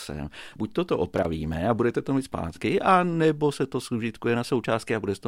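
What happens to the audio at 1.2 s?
At 1.16 s a burst of loose connector crackle breaks into the speech, lasting about 90 ms until 1.25 s, just before "a budete to mít". A worn or dirty contact in the signal path is making and breaking rapidly as it shifts, so the audio is chopped on and off in quick succession, and any DC on the line turns each break into a pop. The result is a short, irregular scratching crackle.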